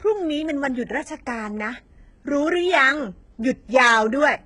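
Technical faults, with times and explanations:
Throughout, HE-AAC compression: the speech has a bright but synthetic top end, with s sounds turning gritty and lispy and a metallic sheen over the upper range, while nothing at all comes through above about 11.1 kHz. The likely cause is heavy HE-AAC coding at a very low bitrate, around 12 kbps: only the lower spectrum is coded, and the treble is rebuilt by copying lower bands upward under a coarse envelope, so its harmonics no longer line up with those below.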